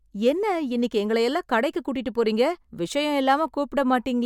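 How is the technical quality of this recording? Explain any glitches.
No glitches or faults audible.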